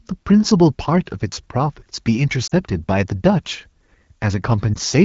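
A brief dip and warble at 2.47 to 2.53 s and again at 4.74 to 4.76 s are lost AMR speech frames. The AMR-WB decoder at 12.65 kbit/s bridged corrupted frames, likely about two 20 ms frames and then one, by repeating the last good settings at fading gain.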